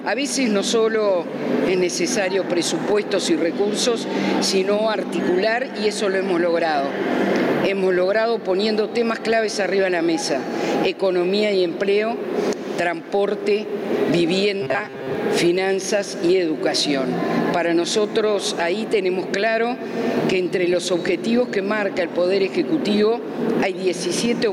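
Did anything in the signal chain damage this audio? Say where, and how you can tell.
Yes. Gain pumping runs through the whole clip. The gain swings by about 20 dB. Levels sound squashed. The likely cause is excessive input gain feeding a fast limiter in call processing.

From 14.62 to 15.15 s the sound becomes a metallic buzz at 133 Hz. This is robotic sound from repeated short buffers. Audio likely arrived too seldom at the driver or buffer stage, so the last 7.5 ms kept looping. About half that stretch is repeats.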